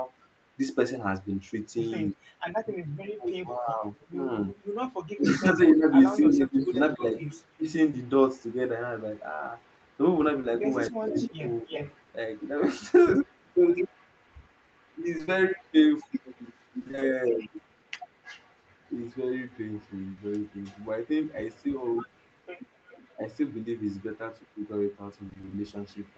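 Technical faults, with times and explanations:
2.10–2.14, 3.96–4.07, 6.29–9.97 and 11.06 to the end, echo leak: A faint delayed copy of the speech trails the original, 262 ms behind in the first two spots and 307 ms behind later. It sits about 35 dB down early, rising to about 20 dB down at 6.29–9.97 and about 30 dB down from 11.06. The likely cause is a far-end loudspeaker whose echo canceller let part of its microphone pickup return. On a spectrogram this appears as weaker, time-shifted copies of the harmonic patterns.
2.13–7.66 and 10.90–11.65, speech suppressed in double talk: The speech level drops in patches while the far side is active, by as much as about 25 dB. The dips add up to about 2 s in the first span and about 0.4 s in the second. This is likely an echo canceller that could not tell the talker from echo and turned both down. The waveform shows notches in the envelope, and the spectrogram shows the upper bands thinning out in those patches.
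7.91–7.95, 10.41–10.45 and 23.63–23.67, short concealed packet loss: Each time, 20 ms of audio never arrived and was patched by extending the preceding sound, then blended back in. It is heard as a tiny smear or wobble. A spectrogram shows a short stretch of held, smoothed harmonics or even-textured noise in place of normal detail.
15.17–15.29, 16.79–17.03 and 25.29–25.53, repeated packet loss (robotic sound): Holes of 20 ms recur in quick succession, three in the first stretch and six in each of the others, filling half of each span. Because every hole is patched by continuing the last sound, the speech turns choppy, with pieces missing. The spectrogram shows a comb of repeated, frozen slices.
20.11–20.19, burst of packet loss: A single 60 ms stretch is missing. The receiver held the last sound and faded it, so a brief buzz or hiss replaces the audio before the speech resumes further on. 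The waveform shows a decaying, overly regular segment, and the spectrogram shows flat, frozen bands that die away.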